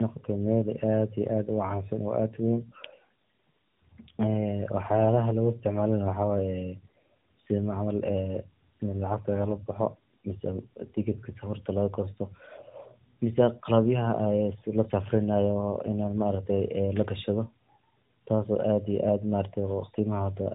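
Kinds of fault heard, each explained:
Tandem speech coding: the speech passed through AMR-NB at 12.2 kbit/s, out to G.711 mu-law at 64 kbit/s, then back into AMR-NB at 12.2 kbit/s, so it was encoded twice by the low-rate coder, each pass building on the previous one's losses. It sounds rough, muffled and warbly throughout. A spectrogram shows nothing above about 3.8 kHz, with smeared, blotchy formants and patchy harmonics, while the waveform looks grainier than the original would.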